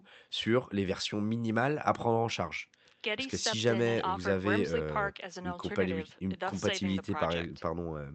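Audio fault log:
No faults heard in this speech.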